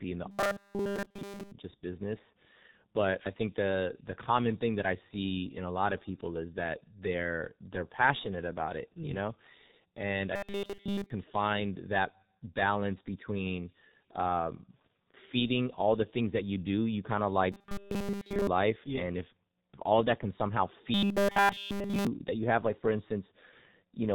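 A speech recording heavily damaged by the G.723.1 codec throughout, at 6.3 kbit/s, with nothing above 4 kHz, so the voice is muffled and hoarse and consonants smear together. That roughness follows the talker's own pitch, which separates it from the second fault: robotic sound from repeated short buffers. At 0.31 to 1.52 s, 10.36 to 11.10 s (after "and i", before "find that balance between"), 17.52 to 18.47 s (after "do you kind of", before "life yeah and if") and 20.94 to 22.07 s (after "of that can somehow", before "that you have like"), the voice collapses into a rigid metallic buzz locked at 200 Hz. Essentially all of the audio in those spans is replaced this way. The likely cause is a 5 ms slice being looped while new audio arrives too late, which fits a player filling gaps by repetition. Because the gaps are covered rather than left empty, there are no silent dropouts, only a steady drone that still loosely tracks the syllables.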